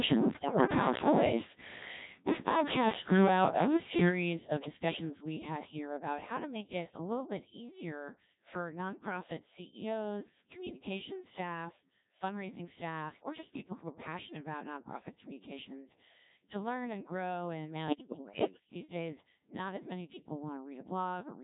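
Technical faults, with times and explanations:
throughout: Codec 2 vocoder. The speech is carried at 1.3 kbit/s, with heavy codec damage. Only pitch, voicing, energy and a spectral envelope survive, and the decoder rebuilds the voice from sine waves, so the waveform is lost. The result is a steady robotic, buzzy tone on every word. Unlike packet loss or a bandwidth-limited codec, the whole voice sounds synthetic all the way through, with no gaps or muffling. Any sound that is not the single voice gets mangled.
0.34–0.67 s and 17.88–18.60 s (the second just after "learn and grow in"): bit errors on digital voice radio. Around one bit in ten arrives flipped. Because each bit sets the pitch, level, voicing or spectrum of a whole frame, the voice lurches in pitch and loudness and turns into warbles, bleeps and robotic gibberish. The first burst fits roughly eight damaged frames and the longer second one about seventeen. 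This sets it apart from the constant vocoder buzz: the errors are short, wild, shifting distortions rather than a steady synthetic colour, and they are not silent dropouts.
7.17 s: microphone volume stepped down. Between "to make it a" and "bit easier for nonprofit", voice and background fall together in a single step of about 2 dB and stay lower afterward. The likely cause is call software reducing the microphone's input volume after judging it too loud. It differs from a fade or compressor pumping in that the change is instant and stays put, and it differs from the bit errors in that tone and pitch are unaffected, with only the level lower.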